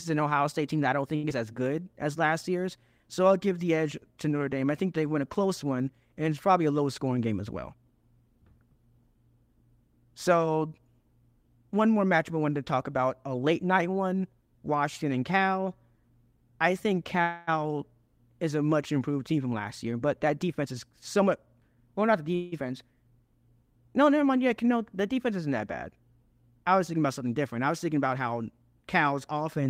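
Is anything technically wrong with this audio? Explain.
Yes. This speech recording has several network playback faults.

At 1.15 s there is a short stall from a late packet, lasting 1.15 to 1.25 s. The jitter buffer ran dry. The receiver held the last sound for about 80 ms until the packet arrived. Nothing is lost, but the sound drags with a slight buzz.

At 1.29 to 1.32 s there is a short concealed packet loss. About 40 ms of audio never arrived in time. The receiver bridged it with a brief synthetic continuation and blended back in. It is heard as a quick smear, and a short sound may drop out.

From 1.77 to 1.95 s there is a jitter buffer slow-down. The receiver repeated single pitch periods to rebuild its reserve, adding 40 ms. The audio plays at 83% speed at an unchanged pitch. It sounds drawn out.

There is a jitter buffer speed-up in three places. The first runs from 7.04 to 7.83 s, after "it's probably a low", at 110% speed. 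The second runs from 19.36 to 22.28 s at 108%. The third runs from 27.94 to 29.33 s, after "something different I was", at 106%. The buffer held too much audio, so short pitch-period slices were cut out. Roughly a tenth to a fifth of a second goes each time. The pitch stays steady, but delivery sounds hurried.

A call audio freeze occurs at 17.22 to 17.49 s, just after "I think", and again at 22.35 to 22.54 s. The last sound is stretched into a fading buzz for 258 ms and then 170 ms before playback resumes where it stopped. The likely cause is packets held up in transit that emptied the jitter buffer. This inserts pauses without losing content.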